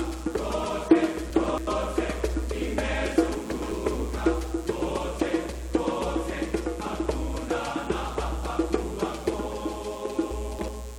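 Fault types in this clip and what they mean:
Mains buzz: There's a steady, raspy buzz running under the whole clip, sitting about 25 dB below the sound itself. It's built on 60 Hz, but because the interference arrives as sharp switching spikes twice per mains cycle, you get a whole ladder of harmonics stretching up into the kilohertz range. That's why it comes across as gritty rather than as a clean low hum. It points to a dimmer, a rectifier or poor shielding somewhere in the chain.
Chunks out of order: This shows up three times, at 1.3 to 1.67 s, 3.34 to 3.72 s and 10.31 to 10.68 s. Each time a block of audio gets played three blocks later than it should, after the material that was meant to follow it. Nothing actually goes missing, but each stretch sounds jumbled, with hard joins where the blocks meet. The roughly 370 ms span fits a chunk size of about 93 ms.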